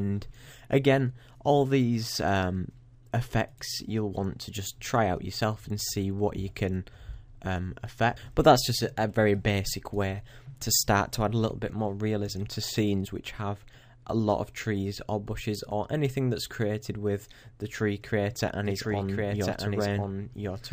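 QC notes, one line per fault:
18.65 s to end, doubled audio track: a dry full-band copy cuts in abruptly, trailing about one second behind at roughly 5 dB lower, likely from a second, slower capture path. Spectrogram and waveform show the same shapes repeated, offset by one second.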